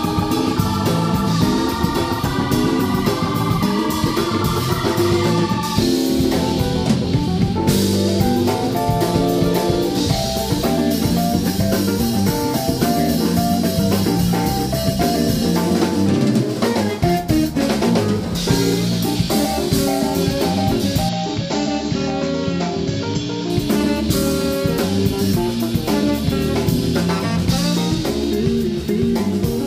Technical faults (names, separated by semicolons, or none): input switched to a poorer device